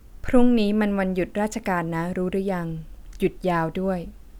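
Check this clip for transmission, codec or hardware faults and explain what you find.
There's one hardware fault here: sample clock jitter, running from 1.13 s to 3.97 s. The converter's clock is wobbling by something like a couple of microseconds, so each sample lands a touch early or late. Where the speech waveform moves fast, that timing slip becomes an amplitude error, sitting roughly 40 dB under the signal. You hear it as a faint hiss or grittiness that rides on the louder, brighter parts and drops away in the pauses.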